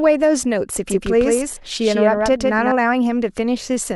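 A speech recording with a doubled audio track from 0.90 s to 2.72 s: a second, full-band copy trails by roughly 150 ms, about 5 dB quieter, with no room tail, and it starts and stops abruptly. It's likely the same signal captured again through a slower path.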